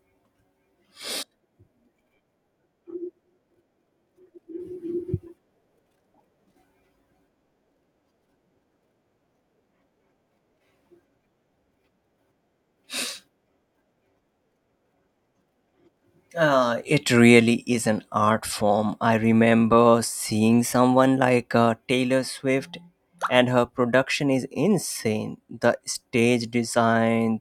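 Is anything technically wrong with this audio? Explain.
Yes. From 20.61 to 21.23 s, just after "form I remember seeing", the speech suddenly runs fast and sharp, about 5.2% quicker and roughly 88 cents higher (close to a semitone), then snaps back to normal. This is a drift correction step. The likely cause is clock-matching software abruptly raising the playback rate to drain its buffer, so speed and pitch jump together for about 0.6 s before the rate is restored.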